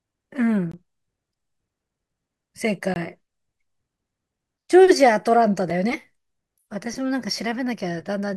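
At 0.72 s and again at 2.94 s the speech drops into a block of digital silence lasting 20 ms, and at 5.7 s a shorter 5 ms block follows. In each, a run of samples went silent, most plausibly because the output buffer wasn't filled in time. The cut and the return have no fade. The 20 ms gaps read as short holes, the 5 ms one as a tick. The abrupt silence and hard edges set this apart from a concealed packet loss, which fills the gap with smeared or faded sound.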